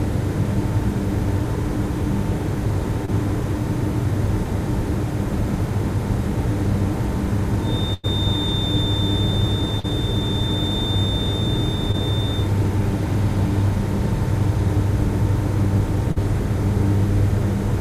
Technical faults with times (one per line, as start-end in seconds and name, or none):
3.05-3.10 short concealed packet loss
7.58-12.52 feedback whistle
7.94-8.05 burst of packet loss
9.79-9.86 short concealed packet loss
11.92-11.95 short concealed packet loss
16.11-16.18 short concealed packet loss